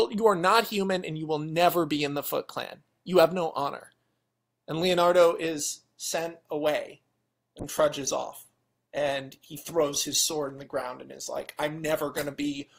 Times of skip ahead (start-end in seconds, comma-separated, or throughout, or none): none